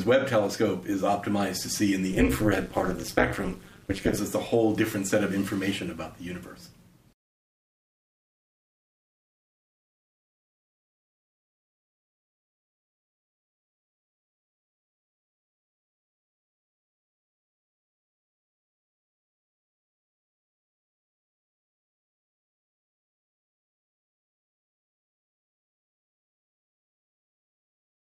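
Overlap-add ripple runs from 2.13 to 4.19 s. The audio was split into windowed frames and rejoined with an overlap whose windows fail to add up to a steady gain, so the level dips and recovers once per frame, around 200 times a second. The swings are severe, about 60 dB deep, nearly silencing the sound at each trough. The result is a harsh, metallic buzz with extra tones around each note, laid over the whole passage.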